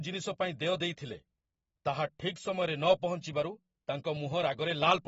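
Speech carrying audible AAC compression throughout: nothing survives above 7.6 kHz, and sibilants sound dull and smeared, likely from a low-bitrate AAC-LC encode around 24 kbps.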